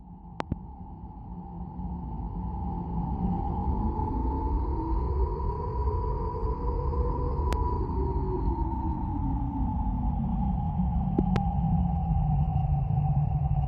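At 0.40 to 0.54 s a loud pop occurs as a double pulse, then a single pop at 7.53 to 7.55 s, then another pair at 11.19 to 11.38 s. Each is a sharp transient roughly 20 dB above the surrounding level, with the audio continuing underneath. The likely cause is a sudden voltage step or spike, such as a plug, switch, static discharge or driver glitch, entering the signal chain and being shaped by the circuitry after it.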